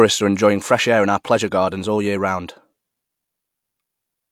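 No technical faults can be heard anywhere in the recording, and the signal holds steady with nothing breaking into it.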